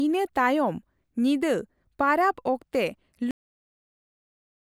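Speech that stops abruptly at 3.31 s, mid-sound, and drops straight into digital silence with no natural decay for the remaining 1.3 s or so. This is a cut-off end: the final buffers of audio were never written or played out, so the recording is truncated.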